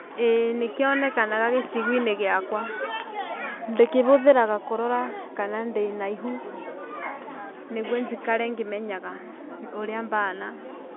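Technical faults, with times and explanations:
No technical faults are audible.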